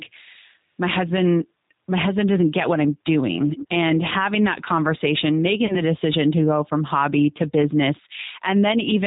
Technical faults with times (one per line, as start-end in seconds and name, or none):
0.00-9.07 G.729 codec
3.44-3.68 echo leak
5.66-5.76 VoIP packet loss concealed by the speech codec